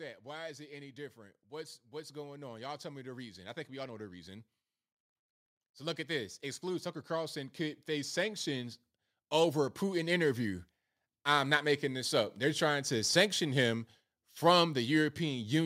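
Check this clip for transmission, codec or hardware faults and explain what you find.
Automatic gain rising occurs twice: from 0.23 to 4.46 s, up about 9 dB, and from 5.61 to 8.78 s, up about 6 dB, ending before "over a". The gain control judged the input too quiet and raised it over seconds, so speech and background swell together, unlike a speaker getting louder.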